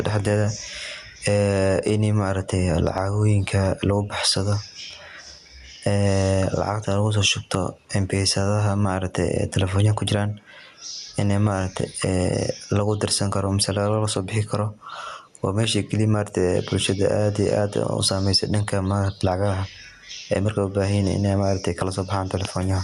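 Gain pumping runs through the whole speech clip. The likely cause is input gain set far too high for the microphone, with a fast limiter or compressor pulling the level down each time speech gets loud and releasing it in the pauses. The gain swings by roughly 10 dB under each loud syllable, so loud and quiet passages sit close together and the speech sounds squashed. The call codec's top end stops near 12 kHz.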